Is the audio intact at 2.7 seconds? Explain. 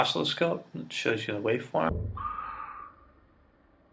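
No. A wrong sample rate fault runs from 1.89 s to 3.93 s, covering 2.7 s. The samples are played back at a third of the speed they were captured at, with no conversion, so time stretches and pitch falls together by the same ratio. The sound drops about 19 semitones, becoming deep and sluggish, which fits audio recorded at 48 kHz but played back at 16 kHz.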